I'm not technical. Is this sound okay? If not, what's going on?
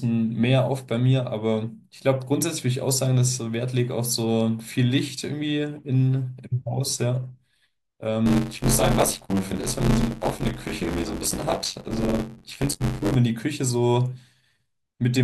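No. From about 8.26 to 13.16 seconds there is buffer tearing. The part of the system that hands audio to the sound hardware has fallen out of step with it, so each small block of audio comes out partly stale: roughly two fifths of every block repeats speech from about a fiftieth of a second earlier, spliced in with abrupt joins. That makes the voice sound robotic, with a buzzy rattle near 94 Hz, which fits a 512-sample buffer.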